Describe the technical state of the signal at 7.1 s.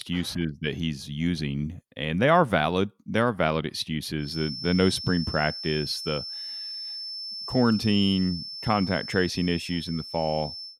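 A feedback whistle runs from 4.16 s to the end, likely a loudspeaker-microphone loop held just short of runaway. It sounds as a thin 5.3 kHz tone and shows as a steady horizontal spectrogram line.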